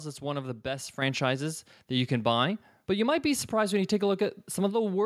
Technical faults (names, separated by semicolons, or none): microphone volume stepped up